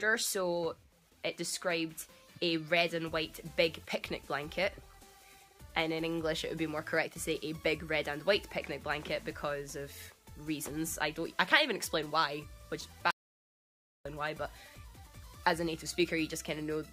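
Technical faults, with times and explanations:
13.11 to 14.05 s, audio dropout to silence: the sound cuts off abruptly and comes back just under a second later, with dead silence in between and no room tone at all. The likely cause is the input briefly disappearing while the recorder kept writing silence.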